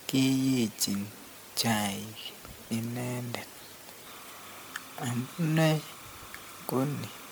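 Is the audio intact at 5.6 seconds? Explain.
No. Timecode bleed runs from 4.07 s to the end. Timecode at 30 frames per second leaks in, a square wave flipping between roughly 1 kHz and 2 kHz. It is a chirping warble about 20 dB below the speech. Generation loss is also present throughout. The speech sounds swirly, smeared and hollow, with blurred attacks. The likely cause is repeated MP3 re-encoding, about seven passes, which fits around 96 kbit/s.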